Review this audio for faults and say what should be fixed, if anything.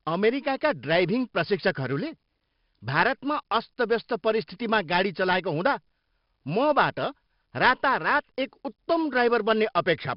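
The speech was stored as 4-bit ADPCM, coding each sample as a small step from a predicted value, with the step size adapting as it runs. Throughout the clip this leaves a gritty hiss riding on every loud syllable and a rough edge on sharp onsets, where the step lags behind the waveform. The damage is heavy, and nothing survives above 5.3 kHz, which fits a low sample rate near 11 kHz and a rate of roughly 44 kbps. Keep a linear PCM or modern-codec master at a full sample rate and use ADPCM only for a final delivery copy where it is truly required.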